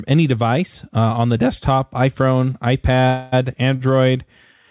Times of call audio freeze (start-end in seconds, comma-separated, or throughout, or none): 3.07-3.34